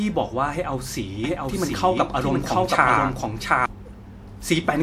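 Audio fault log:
1.24–3.66 s, doubled audio track: a second full-band copy of the speech runs roughly 0.7 s behind the original at about the same level, so each phrase is heard again over what follows. Unlike an echo, the copy has no decay or room colour, and it cuts in and out abruptly at both ends of the span. The likely cause is the audio being mixed in twice, either captured again by a slower path or held as two out-of-step copies by an edit.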